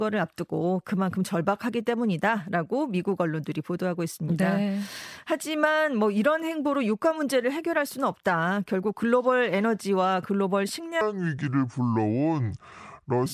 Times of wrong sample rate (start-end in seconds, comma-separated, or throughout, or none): 11.01-13.26